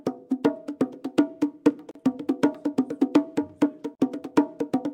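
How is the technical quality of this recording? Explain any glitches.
The recording has two brief dropouts where the sound cuts to silence and then resumes. The first runs from 1.91 to 1.95 s (about 41 ms), the second from 3.95 to 4.00 s (about 43 ms). Both have edges smeared by the codec, and the sound picks up exactly where it left off. They recur every 2.0 s, which points to a gap at a join of encoded pieces: separately encoded two-second segments were spliced without trimming each encoder's leading delay and final-frame padding.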